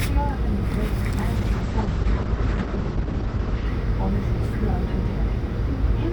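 From 1.37 s to 3.71 s the sound turns rough and watery, and the top end goes dull as everything above 8 kHz disappears, against roughly 20 kHz before and after. This is a call bitrate drop: the bandwidth estimate fell and the encoder was told to spend far fewer bits. The sound points to Opus dropping from around 64 kbps to about 9 kbps, where it stays for about 2.3 s before the bitrate recovers.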